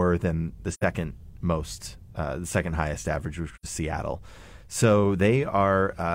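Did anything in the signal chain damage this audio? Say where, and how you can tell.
Yes, at the codec stage, from AAC frame loss with muting. The speech drops into a soft-edged hole from 0.71 to 0.84 s, right after "than the" and before "most uh the second". It happens again from 3.54 to 3.65 s, after "second highest average which". Each gap covers about 85 ms of lost audio, which fits two missing frames. The decoder zeroed their spectrum. The overlapping windows then faded the sound out and back in around each hole.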